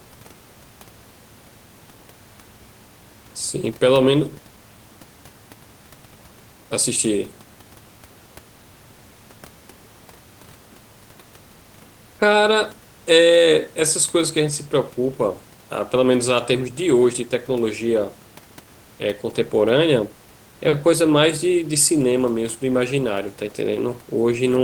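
Nothing's amiss in this bit of speech, just soft room noise sitting about 31 dB under the talking, which is simply part of where it was recorded.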